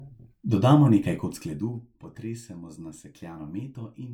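Generation loss runs through the whole clip, most likely from the speech being decoded and re-encoded with a lossy codec several times, which fits an MP3 chain near 130 kbit/s repeated around four times. Each pass quantises on a shifted frame grid, so noise and spectral gaps pile up. The result sounds swirly and hollow, more smeared than a single encode at that rate would be, and consonant attacks lose their edge.

From 1.16 to 1.81 s, zipper noise appears during a level drop of about 10 dB. The gain is being moved in coarse increments, roughly 40 per second, without any smoothing between them, so every jump leaves a tiny discontinuity in the waveform. Strung together, these form a fast ticking, zipping texture riding on the speech for as long as the level keeps falling.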